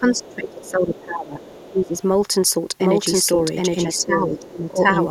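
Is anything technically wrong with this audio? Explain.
Yes. Three kinds of fault are audible in this speech clip.

Speech suppressed in double talk occurs from 0.0 to 1.41 s, 1.72 to 2.02 s and 3.98 to 4.83 s. The talker's level dips by up to about 20 dB in the first stretch and about 15 dB in the others. An echo canceller likely misread overlapping talk as echo and attenuated everything.

The other side's voice leaking through appears at 0.16 to 0.71 s, 0.95 to 1.01 s, 1.41 to 1.88 s and 3.95 to 4.05 s. A second, faint voice sits roughly 25 dB under the talker. This is likely loudspeaker playback that echo cancellation left in the microphone signal.

A doubled audio track starts abruptly at 2.81 s and runs to the end. A full-band copy of the audio, at about the same level as the original, trails it by roughly 0.7 s with no reverberant tail. This likely comes from a second, delayed capture path mixed back in.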